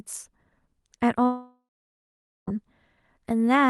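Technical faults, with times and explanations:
1.25 to 2.49 s, long network dropout: the sound stretches into a fading buzz, then about 0.8 s of near silence, and resumes with about 1.2 s missing, likely from lost packets. A brief glitch would not leave this decaying tail or skipped stretch.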